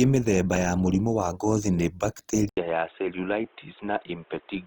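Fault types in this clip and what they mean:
Opus compression: Throughout the speech there is a rough, grainy texture, most likely from Opus in its music (CELT) mode at a rate that fits about 24 kbps. With too few bits for fine detail, the encoder keeps each band's energy but fills the bands with folded or noise-like content, so harmonics turn hazy. On a spectrogram the band still reaches 20.4 kHz, but harmonic lines look smeared and speckled, without obvious holes.
Input switched to a poorer device: At 2.49 s the sound drops out for 80 ms, then returns duller, boxier and about 5 dB quieter until the end, most likely because recording moved to a narrower-band microphone or headset profile. On the waveform there is a short flat gap, then a smaller envelope. On the spectrogram everything above 3.8 kHz is gone after the switch, and a new noise floor appears, roughly 35 dB below the speech.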